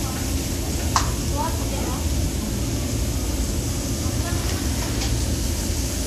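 Throughout the clip, the sound carries layered coding artefacts and nothing above about 14.2 kHz. This points to transcoding between lossy codecs, likely a low-rate Vorbis encode re-encoded to WMA at a higher rate, whose bits preserve the first codec's smearing and band limit while adding its own.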